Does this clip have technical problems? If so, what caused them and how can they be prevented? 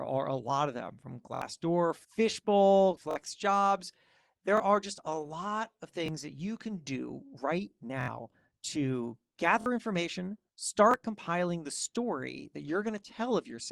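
Yes. A repeated buffer occurs at 1.35, 3.11, 4.57, 6.06, 8.01, 9.61 and 10.91 s. The device ran short of fresh audio and replayed its last block, about 23 ms long, which fits a 1024-sample buffer, one to three extra times. Each repeat is heard as a brief stutter or buzz. On a waveform the same short segment appears copied side by side with hard joins, and a spectrogram shows thin vertical lines at each seam. A larger output buffer or a higher-priority audio thread would prevent it.

Repeated stalls (stutter) run from 2.23 to 3.28 s. Packets arrived late about ten times, and each time the jitter buffer ran dry, so the receiver stretched the last sound for up to 13 ms per gap, roughly 97 ms in total, with nothing actually dropped. The passage drags and hiccups. A spectrogram shows smeared, repeated frames at each gap. A steadier network path or a deeper jitter-buffer target would prevent this.

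A jitter buffer slow-down spans 3.93 to 5.28 s. To rebuild its reserve, the receiver repeated individual pitch periods, playing at 94% speed and adding about 94 ms while keeping the pitch unchanged. Sounds become drawn out. On a spectrogram, harmonics stay level while segments lengthen. Reducing network jitter would prevent it.

A jitter buffer speed-up spans 7.27 to 7.89 s. Too much audio had piled up, so the receiver cut out short pitch-period pieces, running at 108% and removing roughly 50 ms. The sound turns hurried at the same pitch, and a spectrogram shows compressed segments with unchanged harmonic spacing. Smoother packet delivery prevents the bursts that trigger it.

The call codec's roughly 12 kHz upper limit is visible as an empty band above that line on a spectrogram.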